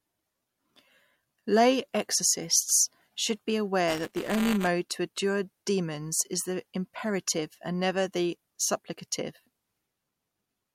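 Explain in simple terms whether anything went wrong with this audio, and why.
Buffer tearing at 3.87–4.67 s, after "exorcists should be": playback slipped, splicing slivers of slightly older sound into every buffer, creating a 200 Hz robotic buzz.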